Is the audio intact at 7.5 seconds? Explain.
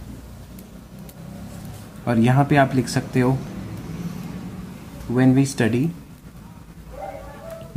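Yes, the audio at 7.5 seconds is intact, with no dropout, click, distortion or other fault at that moment.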